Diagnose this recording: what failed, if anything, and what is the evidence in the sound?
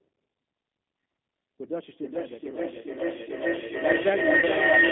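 At the codec stage, the speech was carried by the G.729 codec, and the sound fits an 8 kbit/s G.729A stream. Throughout, the band is confined to roughly 200 Hz to 3.6 kHz, so nothing of the upper band survives. The codec rebuilds each 10 ms frame from a filter, a pitch predictor and a few pulses, which leaves plainly audible roughness and a synthetic edge.

In the acoustic path, a feedback howl begins at 1.99 s and runs to the end of the clip. A second device in the same room picked up the far end's loudspeaker and fed it back into the call. The loop gained level on each trip instead of decaying, and it narrowed to a tone around 2 kHz. The loop's delay is roughly 0.4 s, and the tone peaks about 7 dB above the speech. Nothing breaks the loop before the clip ends.

At the network stage, VoIP packet loss concealed by the speech codec produces a 30 ms gap, which fits a single lost packet. The gap is heard from 4.39 to 4.45 s. 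The decoder filled it by extending its last pitch and filter settings while lowering the gain, so the sound is stretched and fades. Because each frame builds on the one before, the sound stays weak or distorted just after the gap.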